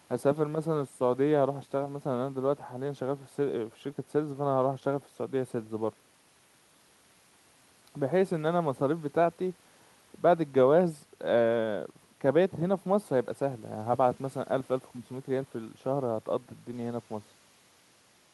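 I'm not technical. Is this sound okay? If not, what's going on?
Yes, it sounds fine.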